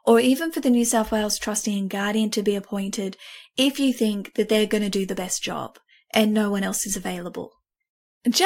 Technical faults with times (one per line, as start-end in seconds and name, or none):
none